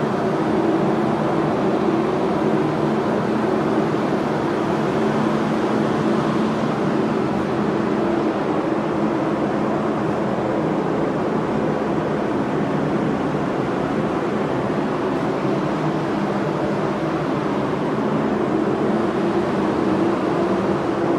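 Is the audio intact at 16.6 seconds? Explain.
Yes, the audio at 16.6 seconds is intact: no dropout, glitch or other fault can be heard at that point.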